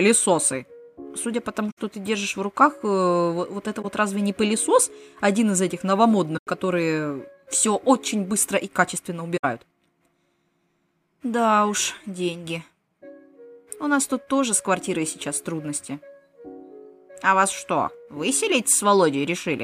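Corrupt frame concealed at 1.70–1.80 s, 3.82–3.85 s, 6.37–6.47 s and 9.36–9.45 s: the decoder detected damaged AAC frames and covered them itself. Corrupt frame decoded at 11.94–12.02 s: damaged frames were played as received, so misread data threw stray energy across wrong frequencies, peaking at about -25 dBFS.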